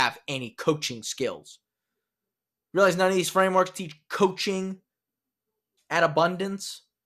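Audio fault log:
Nothing to log here; the speech comes across with no faults to note.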